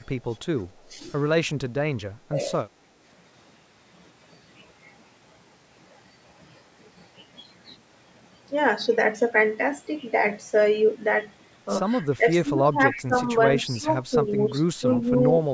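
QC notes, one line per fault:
0.89–1.03 s, 2.29–2.39 s, 12.17–13.27 s, 13.78–13.88 s, 14.81–15.06 s: speech suppressed in double talk. The speech dips by about 5 to 20 dB, deepest near 13.8 s. The longest dip runs about 0.7 s. The likely cause is an echo canceller ducking the near talker while the far side also talks.
12.96–13.04 s: echo leak. A faint delayed copy of the speech slips through, about 20 dB below it and about 0.3 s late. It likely comes from a loudspeaker echo that the echo canceller did not fully remove.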